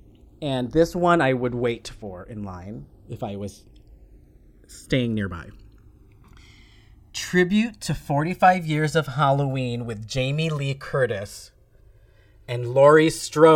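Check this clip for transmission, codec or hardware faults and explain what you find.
One hardware fault runs through the whole recording: the channels drift apart. The two sides come from devices on separate clocks, mismatched by roughly 200 ppm, so their offset grows to about 2 ms. Summed to mono, the speech takes on slow flanging. A spectrogram shows comb notches sweeping steadily across frequency.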